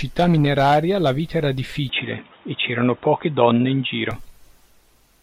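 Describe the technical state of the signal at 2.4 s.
At 2.4 s the sound goes dull and boxy, cut off above 3.8 kHz, with a level shift and faint new noise, likely an input switched to a poorer device, from 1.89 to 4.11 s, just after "mineraria la vita era".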